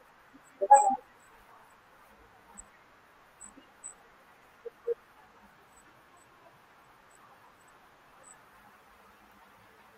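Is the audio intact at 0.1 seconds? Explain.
Yes, at 0.1 s the speech plays through cleanly, with no dropout, click, distortion or other fault audible at that moment.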